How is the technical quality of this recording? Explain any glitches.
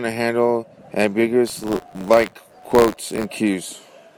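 The recording has one clear glitch: buffer tearing from 1.46 to 3.26 s. The writer and reader of the playback ring buffer have drifted so they cross every period. A small slice of each buffer, a few percent, carries audio from a lap earlier, some tens of milliseconds old, with hard joins either side. The result is a rattling, robotic buzz at 86.1 Hz, which fits a 512-sample buffer, heard only while speech is present. A spectrogram shows vertical lines at that regular spacing, and a zoomed waveform shows repeating discontinuities.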